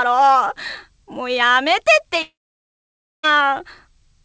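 From 2.22 s to 3.25 s the sound breaks off, likely from a long network dropout. A short fading buzz continues the last sound, then roughly 0.92 s of near-silence follows before audio resumes with a stretch lost. A spectrogram shows a smeared, decaying tail, then an empty band, under the call path's 8 kHz ceiling.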